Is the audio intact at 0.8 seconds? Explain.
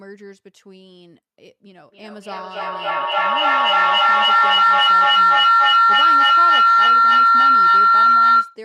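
Yes, the speech at 0.8 seconds is intact, with no audible fault at that moment.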